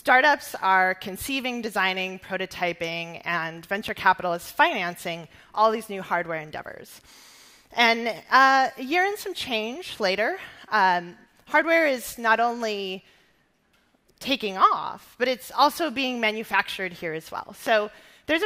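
A single loud pop or thump sits on top of the sound at 3.88–3.91 s, about 5 dB above it, and another at 17.67–17.69 s, about 10 dB above, with the sound continuing underneath. Each is likely a brief voltage pulse from a plug, switch, static or driver glitch.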